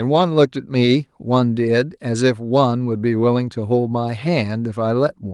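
Nothing stood out on listening to this speech recording.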